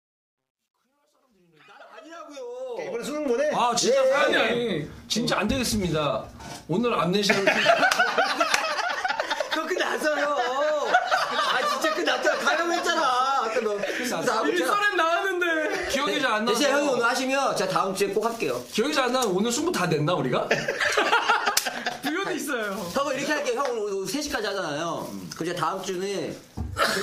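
The fade-in at the start of the audio, running from the very beginning to 3.28 s, carries truncation distortion on a fade. The gain stage behind it appears to drop low-order bits without dither, which fits a 12-bit path. Between 0 and 1.83 s, where the level is lowest, the sound turns gritty. On a waveform those quiet cycles look like coarse square steps. A spectrogram shows broadband hash instead of a clean rise.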